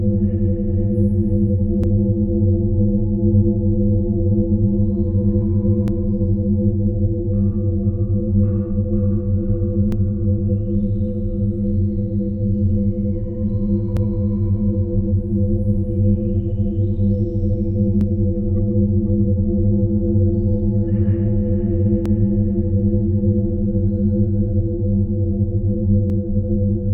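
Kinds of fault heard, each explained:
Overlapping chunks: the audio was handled in blocks of about 4 s, and each block begins 44 ms before the previous one ended, so that short stretch plays twice at every join. It is heard as a brief stutter or click at 1.84, 5.88, 9.92, 13.97, 18.01, 22.06 and 26.10 s. A waveform shows a 44 ms segment duplicated with an abrupt step at each join. A spectrogram shows thin vertical broadband lines at those points.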